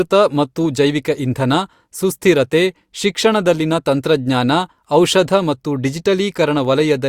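No technical faults can be heard at any point in this recording of speech.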